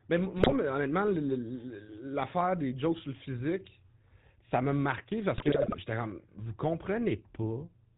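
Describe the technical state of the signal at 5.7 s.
At 5.7 s the signal is inside a burst of GSM bit errors running from 5.36 to 5.79 s, just after "physique ça m'a marqué". Corrupted filter, pitch and gain parameters reach the decoder, so frames come out with warped spectra and erratic level, heard as squawks, pops and gargling. The density points to a bit error rate of about 3%.

Underneath sits the GSM full-rate codec, whose decimated pulse excitation and 4 kHz band limit give the speech a plainly audible buzzy, gravelly roughness, consistent with 13 kbps.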